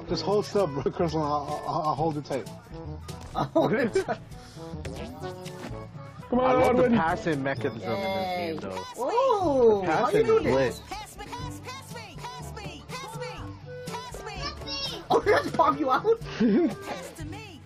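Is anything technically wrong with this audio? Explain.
Yes. Compressed frames are skipped at 0.85, 2.85, 4.73, 6.21, 7.74 and 15.13 s. At each point the decoder never played a short run of frames, either because they were missing from the stream or rejected as damaged. The audio jumps forward by around a tenth of a second, a little less at 0.85 s, which fits a few frames of 23.2 ms each. Each join is an abrupt skip where the audio picks up again further ahead.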